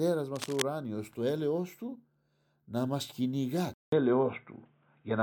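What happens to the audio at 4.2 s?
Input switched to a poorer device, from 3.74 s to the end, right after "να μας κυνηγά". A 0.19 s silence marks the change, likely to a narrower-band microphone. The speech turns boxy with nothing above 3.8 kHz, shifts in level by about 5 dB, and gains faint new background noise.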